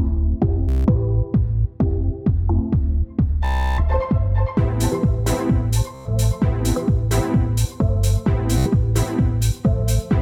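Bluetooth stutter at 0.69–0.87, 3.45–3.82, 5.95–6.08 and 8.58–8.68 s: late or lost packets make the receiver loop a short slice, giving a machine-gun buzz before the sound resumes further on.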